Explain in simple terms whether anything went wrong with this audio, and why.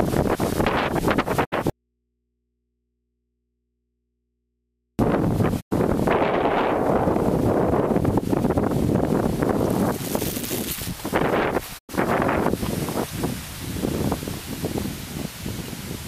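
Yes, two kinds of problem. At 1.44, 5.60 and 11.77 seconds there is a digital broadcast dropout. The receiver briefly lost its signal, faded quickly to complete silence for about a tenth of a second, then resumed. The gaps are truly silent and very short, and what was sent meanwhile is gone.

From 1.70 to 4.99 seconds there is an audio dropout to a faint residue. The sound cuts off abruptly and, for over three seconds, only a faint mains hum remains, likely because the input stayed live after the signal was lost. That hum, and the length, set it apart from the silent broadcast gaps.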